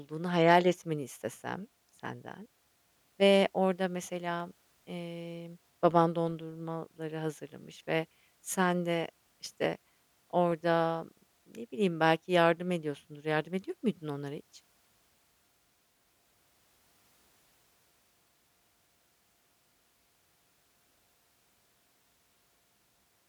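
Dropped samples at 4.40 and 10.52 s: each is a single sharp click in the speech, likely where a fraction of a millisecond went missing and the waveform jumped.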